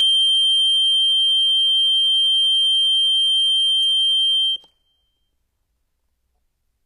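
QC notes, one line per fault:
Throughout: HE-AAC compression, likely; treble sounds bright but synthetic, with a gritty, metallic top end, as upper bands are copied from below, fitting a bitrate near 24 kbps.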